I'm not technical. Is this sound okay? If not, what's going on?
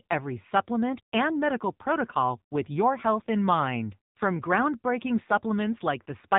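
No. The speech sounds muffled and clearly buzzy throughout, the classic AMR narrowband mobile codec, which squeezes sound through a phone-call channel, cutting everything above 3.8 kHz.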